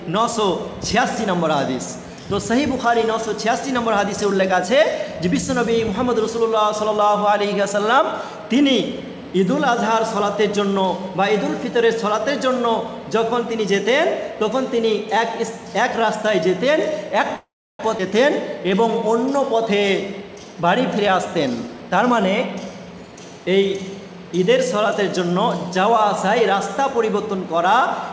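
At 17.36 s packets were likely held up in transit and the jitter buffer ran dry, producing a call audio freeze: the receiver stretched the last sound into a fading buzz that falls to near silence for about 330 ms. When the packets arrive at 17.80 s, playback resumes where it stopped, having gained 433 ms of delay.

At 17.98 s the receiver discards a backlog of roughly a third of a second of audio to recover that lag. This skip ahead joins both sides of the jump almost directly, so the sound lurches forward with a missing stretch.

From 19.55 to 22.03 s the jitter buffer still holds more audio than it aims for. It runs a jitter buffer speed-up, repeatedly trimming pitch-period-sized pieces, about 150 ms in total. The sound plays 6% faster at unchanged pitch and comes across as slightly hurried. Throughout, the G.722 call codec leaves nothing above 8 kHz.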